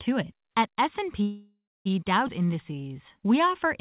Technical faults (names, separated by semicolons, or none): call audio freeze; skip ahead; jitter buffer slow-down